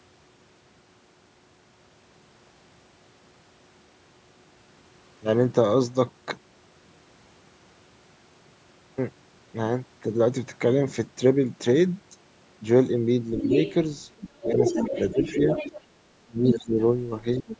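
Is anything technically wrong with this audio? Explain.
Yes. Two related problems appear near the end, both likely from the call's echo canceller.

The other side's voice leaks through at 13.42 to 13.74 s, 14.18 to 15.81 s, 16.48 to 16.56 s and 17.35 to 17.57 s. The far end was playing on a loudspeaker. The canceller likely failed to subtract it from the microphone signal. The remnant sits only about 5 dB under the talker in the first three stretches and around 15 dB under in the last.

Speech is suppressed in double talk at 15.13 to 15.41 s, 16.02 to 16.72 s and 17.41 to 17.54 s. Both sides spoke at once. The canceller likely mistook the talker for echo and turned everything down. The first dip is shallow, around 10 dB. The second is the worst, falling by roughly 35 dB for about half a second, so the voice nearly vanishes. The third drops around 20 dB.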